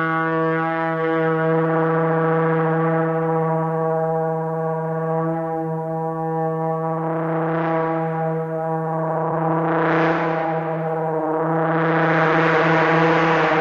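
No technical faults are audible anywhere in the recording.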